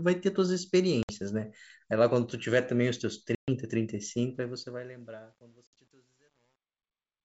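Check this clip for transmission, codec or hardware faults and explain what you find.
Two kinds of fault show up here: packet loss on what sounds like an ADPCM call, and truncation distortion on the closing fade.

The packet loss hits three times. At 1.03 to 1.12 s about 60 ms drops out. At 3.35 to 3.49 s a longer hole of about 130 ms goes missing. At 5.67 to 5.80 s about 70 ms is lost in patches spread over 100 ms, with the longest run about 60 ms. The gaps point to a handful of packets each time, and roughly fifteen in the middle one. Each hole is straight silence with hard edges. ADPCM only sends differences, and the decoder tracks its own predictor and step size. Once packets vanish, the receiving end has lost track of the sender's state. So when the speech comes back, it returns slightly distorted, and then takes some tens of milliseconds to settle.

The truncation distortion runs from 4.34 s to the end at about 7.2 s. 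The trouble is the gain stage doing the fade. It looks like it's keeping only about 10 bits and adding no dither. As the level sinks toward that coarse bottom step, the waveform gets chopped into a few square steps. From about 4.97 s on it's at its worst: the tail sounds gritty instead of fading away cleanly.

The underlying coding sounds like full-rate G.722 wideband, with speech reaching up to about 7 kHz.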